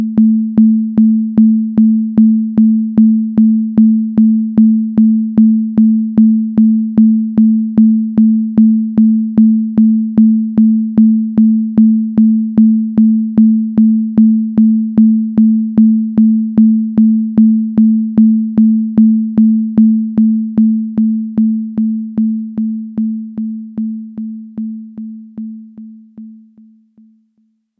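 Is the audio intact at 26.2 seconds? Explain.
Yes, at 26.2 seconds the audio is intact, with no dropout, click, distortion or other fault to be heard there.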